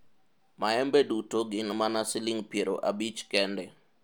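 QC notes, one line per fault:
Nothing to flag on this speech recording, as there's no fault to log anywhere in it.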